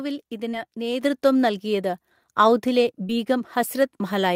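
This speech clip has two brief smears, at 0.51 to 0.55 s and 3.07 to 3.11 s, where the sound wobbles for an instant. Each is short concealed packet loss: about 20 ms of audio arrived too late to decode, and the receiver covered the gap by extending the preceding sound before blending back into the real signal. At 1.02 s, voice and background jump up together by about 6 dB. That is the microphone volume stepped up: the call software judged the input too quiet and raised the device's gain in one step.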